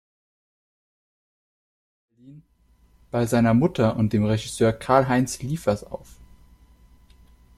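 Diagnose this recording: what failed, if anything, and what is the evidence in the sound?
Nothing in the signal chain has failed: the level rises smoothly from around 2 s to full by 3.5 s, an ordinary editorial fade-in with no click or hard edge, and the rest of the recording shows no dropouts, distortion, timing disturbance or level discontinuity.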